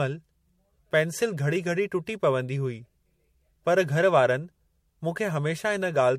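From start to finish the speech has a swirly, hollow smear with softened attacks and nothing above 16.5 kHz, likely generation loss from several passes through roughly 64 kbit/s MP3.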